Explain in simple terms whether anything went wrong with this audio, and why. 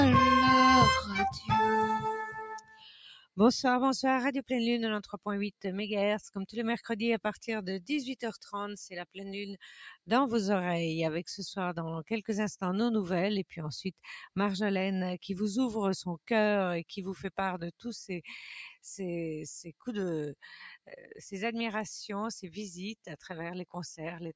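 Yes, something went wrong. All the way through, the sound gently pumps and wavers in level, with held and fading parts sinking a little while sharper hits come through. That is a noise suppressor applied to music or sounds. A filter meant to clean up a talking voice on a call was left switched on, and it mistakes steady tones and natural echo for background hiss, so it keeps turning them down a little, then back up.

At a few moments the dips are much deeper: 1.34 to 1.5 s, 2.58 to 3.38 s, 5.04 to 5.19 s, 9.6 to 10.09 s, and 20.86 to 21.18 s. Each is sound cut by the noise suppressor. The same filter decided these particular stretches were mostly noise and pulled them well down, so they briefly sink or drop away, with the longest gap near 3 s.

The clip also passed through ordinary call microphone processing, which leaves nothing above 8 kHz. That is normal for a call and is not a fault.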